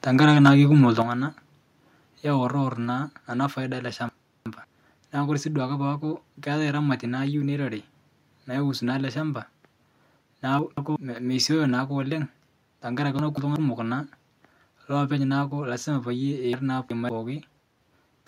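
From 0.44 to 0.5 s the loudest peak sounds flattened and harsh, with a crackling edge. This is microphone overload: the input likely ran about 5 dB above the converter's ceiling, so the waveform tops were cut off across around one in twenty samples. Squaring off the peaks adds the gritty distortion heard on that syllable.

At 1.02 s the whole signal, voice and background together, drops by about 7 dB in a single step. A second, smaller drop of about 2 dB follows at 2.85 s. Both are consistent with the microphone volume being stepped down, with call software likely cutting the device's input gain after detecting the overload. The level falls instantly rather than fading.

From 4.09 to 4.64 s, after "ana paida ale" and before "naaku kore sii duake", the audio jumbles briefly. This is chunks out of order: a block of audio arrives late and plays after material that should follow it. Here it lands two blocks late, which fits chunks of about 186 ms. 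The same fault recurs from 10.59 to 10.96 s and from 13.19 to 13.56 s with one-chunk displacements, and from 16.53 to 17.09 s with a two-chunk displacement.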